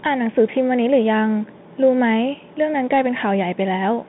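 From start to finish the speech sounds boxed-in and thin, confined to roughly 150 Hz to 3.7 kHz with nothing above 3.8 kHz, while a granular hiss sits underneath, s sounds come out scratchy, and louder bright moments break up audibly. That is the Bluetooth CVSD headset codec: each sample is reduced to a single up-or-down bit, which fits a 64 kbps stream, and the adaptive step cannot keep pace with fast, high-energy detail.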